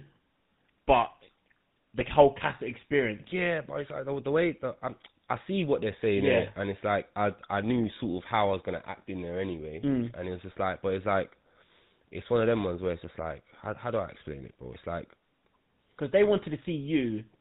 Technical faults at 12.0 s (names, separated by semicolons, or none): GSM full-rate codec